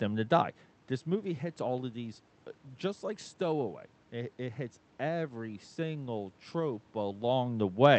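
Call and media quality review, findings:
Nothing stood out on listening to this speech clip; no finding to raise.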